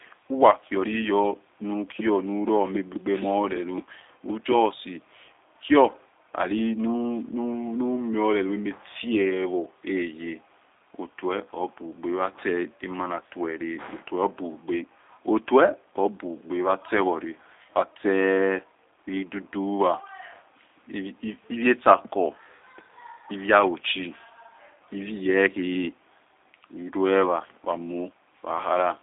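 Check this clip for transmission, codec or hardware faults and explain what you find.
One fault runs through the whole clip: G.729 codec damage, plainly audible. The sound is consistent with an 8 kbit/s G.729A stream. The codec does not send the waveform. It sends a vocal tract filter, a pitch predictor and a few pulses per 5 ms half-frame, and the speech is rebuilt from those. The result sounds rough and slightly synthetic. The line band sits between 300 Hz and 3.7 kHz, with nothing above 3.8 kHz.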